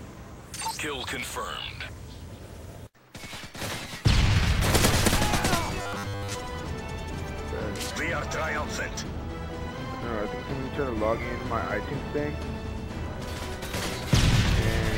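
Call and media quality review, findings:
Robotic sound from repeated short buffers, 5.82–6.35 s. Rigid metallic buzz at 100 Hz, consistent with a 10 ms buffer replayed while most of the incoming sound is skipped. Likely a playout buffer underrun. Spectrogram shows evenly spaced 100 Hz harmonic stripes. Waveform shows roughly repeating 10 ms cycles.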